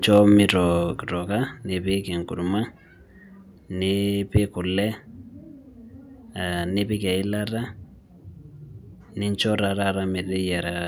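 Speech in the clip is marred by two faults. The microphone's input level was likely set too high, causing microphone overload: from 0.15 to 0.18 s the peaks overshoot the converter's ceiling by about 1 dB, and a small fraction of samples are flattened, giving those syllables a harsh, crackly edge. The call software then likely reacted to that overload by stepping the microphone volume down. At 1.02 s both voice and background fall abruptly by about 4 dB and stay at the lower level.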